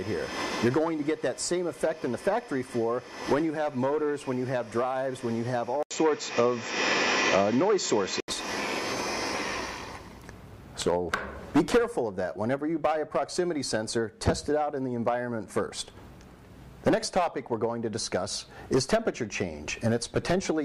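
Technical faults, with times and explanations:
5.83 to 8.28 s, input switched to a poorer device: an 80 ms silence opens the segment, then the sound turns dull and boxy, with nothing above 7.6 kHz, a level shift of around 5 dB, and a different noise floor sitting roughly 40 dB below the signal. The likely cause is the capture path moving to a narrower-band microphone or headset profile, whose own tone and noise replace the original until full bandwidth returns at 8.28 s.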